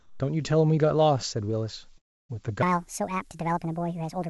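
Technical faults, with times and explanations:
0.00–0.20 s, comfort noise in place of the background: the opening background is a steady, featureless hiss about 4 dB quieter, likely synthetic noise sent during a speech pause.
1.98–2.31 s, long network dropout: sound cuts out for about 0.3 s. The gap is filled with silence. The lost audio, likely from missing packets, never returns.
2.63–4.30 s, section at the wrong speed: the rest plays 1.53 times too fast. Pitch rises about seven semitones, sounding high and hurried, likely from playback on the wrong clock.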